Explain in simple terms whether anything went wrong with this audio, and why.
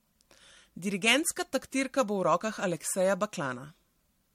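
Generation loss runs through the whole clip, from start to finish. The speech sounds swirly, smeared and hollow, with the starts of sounds blurred, and nothing remains above 16.5 kHz. The likely cause is that the audio was squeezed into a compact MP3-style format, unpacked, then squeezed again, about four times over. Each round throws away slightly different detail, so the small damage from every pass piles up into that watery, washed-out character.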